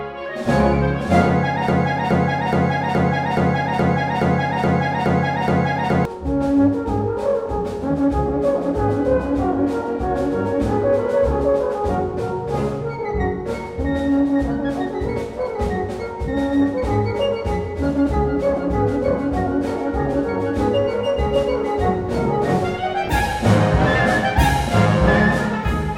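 A stalled stream likely resent its last fragment: from 1.68 to 6.05 s, a 0.42 s broken-record loop repeats ten times, erasing the audio meant for that span.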